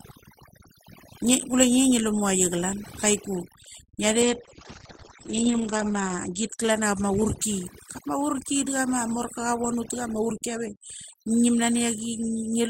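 From the start, overdone noise removal is at work: a suppressor set far too aggressively keeps cutting individual frequency bands whenever they sit near its noise estimate, taking soft parts of the speech with them. The background collapses into near-silence sprinkled with twinkling specks.

At 4.24 s a call bitrate drop sets in. The bandwidth estimate fell and the encoder was pushed to spend far fewer bits, with the sound suggesting a fall from around 32 kbps to roughly 9 kbps. Coding coarsens and the top end narrows from 20 kHz to 8 kHz, leaving the speech muffled and rough, worst for about 1.7 s, before recovering by 7.81 s.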